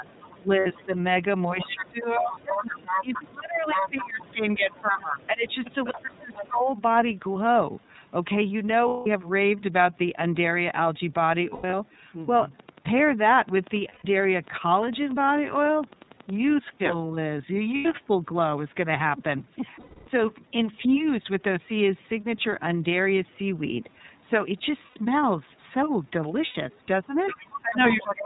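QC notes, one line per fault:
Throughout, iLBC codec: the whole clip is band-limited to 4 kHz. The excitation is coded in independent frames, and the frame rhythm points to the 30 ms mode. This gives the speech a clear but rough, slightly synthetic grain. On a spectrogram, energy ends at a flat ceiling near 4 kHz, with smeared, grainy harmonics below it.
0.6 to 0.67 s, 8.88 to 9.07 s, 11.49 to 11.74 s, 13.88 to 14.05 s, 17.76 to 17.86 s, 19.8 to 20.08 s, 24.86 to 24.97 s, 26.45 to 26.56 s, lost iLBC frames: the gaps last 60 to 270 ms. At 11.49 s the losses are scattered over 240 ms rather than in one block. The decoder repeats the last pitch cycle mixed with noise, so each gap sounds like a held, buzzy vowel that fades on the longer losses. On a spectrogram these show as flat, repeated harmonic stripes, and normal speech returns immediately after each one.
0.06 to 0.86 s, 1.58 to 6.58 s, 26.73 to 27.95 s, other side's voice leaking through: a second voice sits under the talker. 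It is faint at first, nearly as loud as the talker from 1.58 s, and about 10 dB down at the end. The likely cause is an echo canceller that left part of the far end's loudspeaker sound in the microphone. On a spectrogram this appears as a separate, overlapping harmonic pattern.
0 to 0.95 s, 1.74 to 5.47 s, 6.02 to 6.7 s, 27.61 to 28.25 s, speech suppressed in double talk: while both sides overlap, the talker dips by up to roughly 15 to 20 dB, loses high end or drops out in pieces. About 3 s in total is affected within the second range. This is likely the canceller turning everything down when it cannot separate the two voices. On a waveform these show as sudden envelope troughs and holes.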